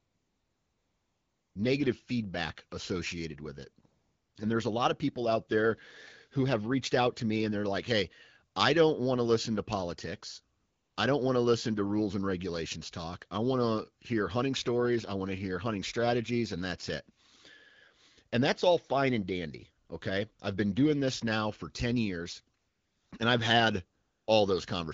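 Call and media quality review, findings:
AMR comfort noise: steady, smooth synthetic hiss replacing the real background in the pauses at 0.0–1.55 s (ends before "negative feedback associated with"), 3.85–4.35, 10.57–10.95, 19.87–19.89 (after "all fine and dandy"), 20.33–20.39 (before "I've been doing this"), 22.57–23.11 and 23.99–24.27 s. The phone stopped sending speech frames, and the receiver synthesized noise from a rough level and spectrum estimate. The speech sounds like light HD Voice wideband coding at around 12.65 kbit/s.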